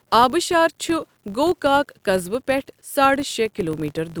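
Speech runs with a grainy, level-following distortion throughout, sitting roughly 45 dB below the voice, likely from low bit depth without dither, with values truncated to about 10 bits; the waveform shows visible stair-steps in quiet passages. A filter restarted on every block adds a regular tick-buzz near 47 Hz, fitting a 1024-sample block, seen as evenly spaced vertical lines on a spectrogram.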